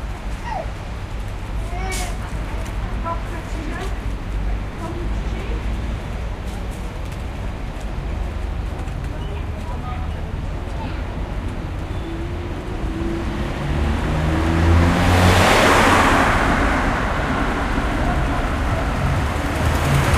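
Nothing in these sounds stood out as a technical fault on listening.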